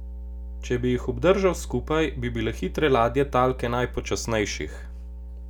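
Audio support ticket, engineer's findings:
Mains hum throughout speech. Steady 60 Hz tone with low harmonics, strong, roughly 10 dB under signal. Power line coupling via ground loop or nearby transformer.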